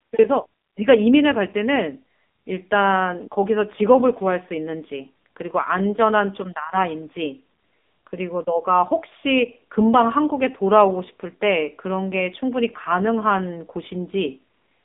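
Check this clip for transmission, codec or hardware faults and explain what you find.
One fault is present, and it runs through the whole clip.

AMR narrowband mobile codec, throughout: the speech passes through a 200 Hz to 3.7 kHz line with nothing above 3.7 kHz, and a vocal-tract model rebuilds it from sparse pulses. The heavy buzzy, synthetic damage fits a low mode near 6.7 kbps.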